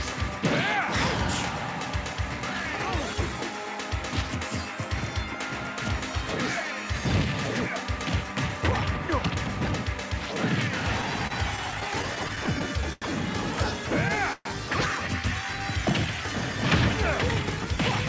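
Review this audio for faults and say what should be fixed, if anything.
From 11.02 to 13.04 s the sound catches and drags in a run of repeated stalls (stutter): about fourteen brief holds, the longest about 89 ms, filled by stretching the last sound so the passage limps forward with nothing lost. Packets were arriving late or more slowly than they played out, so the jitter buffer kept emptying and the receiver concealed each shortfall, around 12 percent of that stretch. Prevention: give the jitter buffer more headroom on this link, or fix the network path's uneven packet timing.

At 14.33 s a single call audio freeze lasts until 14.47 s. The last sound hangs as a fading buzz that drops to silence for about 30 ms before the audio resumes where it left off, adding roughly 126 ms of delay. The likely cause is a burst of packets held up in transit, draining the jitter buffer until they arrived together. 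Prevention: trace and reduce the transient network delay, for example congestion or Wi-Fi contention, behind such bursts.

Between 17.43 and 17.78 s the audio suddenly runs hurried, about 12 percent fast, while the pitch stays the same. This is a jitter buffer speed-up. The buffer held more than its target, so the receiver trimmed short pitch-period pieces, roughly 50 ms in all, to bring the delay back down. Prevention: let the buffer drain its excess more gradually, spreading the time compression so the rush is less audible.

The G.722 call path, with nothing above 8 kHz, carries the audio through all three events.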